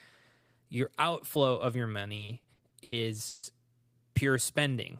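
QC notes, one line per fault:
2.15–3.45 s, repeated stalls (stutter): packets reached the receiver late or slower than playback consumed them, so the jitter buffer drained eight times in this stretch. Each time, the receiver held the speech in place by extending the last sound, fading it during the longer waits, the longest of which was 150 ms. About 380 ms of filler, nearly a third of the span, stretches the speech into a dragging, hiccuping stutter, though nothing is actually lost.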